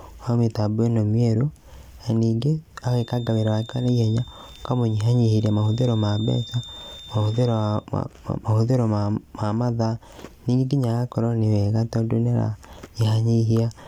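A feedback whistle runs from 2.78 s to 7.89 s of the speech. It is a thin, steady tone at 3.6 kHz sitting roughly 20 dB below the voice, swelling and fading slowly in level. The likely cause is a loudspeaker-to-microphone loop balanced right at the edge of instability: that one frequency keeps recirculating and sustaining itself, but the loop gain stays just short of the point where it would climb into a howl.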